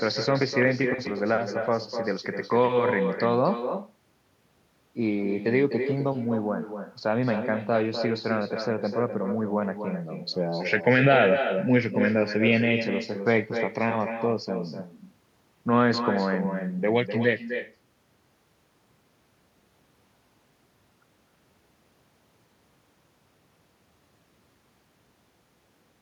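From start to finish, the speech carries an echo with no canceller. The far end replays the audio through a loudspeaker into its microphone, and nothing removes it. Each phrase returns about a third of a second later, about 8 dB quieter and thinner.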